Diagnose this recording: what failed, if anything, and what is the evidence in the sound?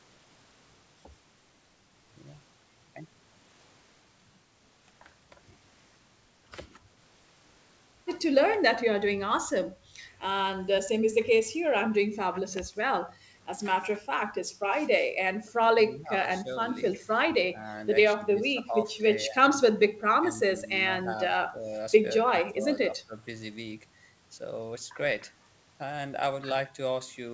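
Speech suppressed in double talk at 15.88–16.49, 17.04–17.09, 17.43–17.74, 18.16–19.39, 19.74–20.7, 21.03–21.17, 21.48–21.72 and 22.22–23.15 s, a call-processing fault. The speech drops in pieces by up to about 20 dB, likely because the echo canceller ducked the near talker while the far side spoke.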